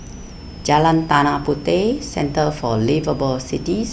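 A switching supply whistle runs throughout the speech, a thin high tone around 5 kHz that wanders between roughly 4.9 and 5.9 kHz. A switching power supply somewhere in the chain has dropped into an audible burst mode, or is beating against a second supply, and its pitch shifts as the load changes. It sits about 30 dB below the speech.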